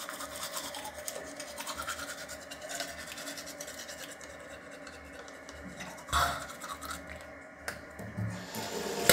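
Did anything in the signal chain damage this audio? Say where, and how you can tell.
No, nothing in the chain seems to have touched this recording of sounds, and there's nothing here that points to damage at any stage.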